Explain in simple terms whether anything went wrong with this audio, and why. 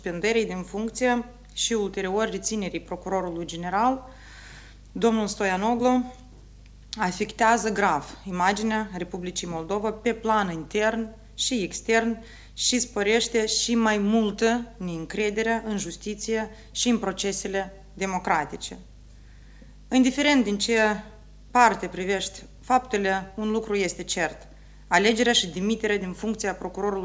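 Nothing went wrong here; I hear no problems.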